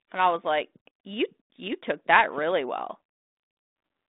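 There are no technical faults to describe in this speech, so there is nothing to place in time order.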